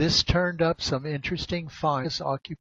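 A short speech recording with one fault. At 2.0 s, lasting until about 2.06 s, there is a brief burst of damaged data in a compressed stream. Some of the coded bytes were corrupted, so the decoder could not read those frames correctly. It loses its place and has to hunt for the next valid frame header. What comes out in that gap is a short chirp, click or hole lasting roughly 60 ms.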